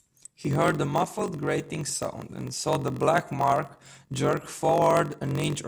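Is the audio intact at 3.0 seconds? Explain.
No. At 3.0 s the speech is affected by a block size mismatch (padded), present throughout: each block is written short and the remainder zero-filled, which fits a 1024-sample read size. The gaps cause a 46.9 Hz buzz and slow the speech to 0.938 times speed with its timbre kept.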